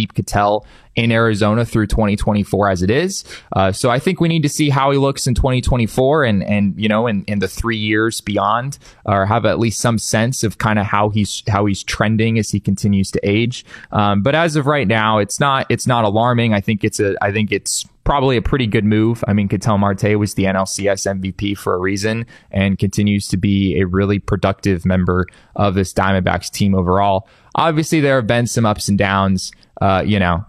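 No technical faults can be heard anywhere in the speech recording.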